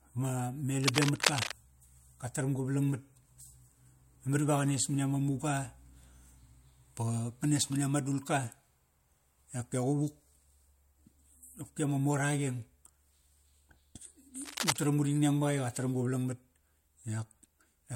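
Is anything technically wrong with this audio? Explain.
Yes. Cable scratch noise appears twice in this speech. From 0.83 to 1.54 s a dense, uneven scratching sits over the sound at roughly the level of the speech. From 14.42 to 14.82 s, just before "uring neng", a quieter rustle sits somewhat below it. The likely cause is a worn cable or connector being moved, so its contact resistance jumps erratically. Unlike isolated clicks or steady crackle, these noises come as short, irregular rasping bursts.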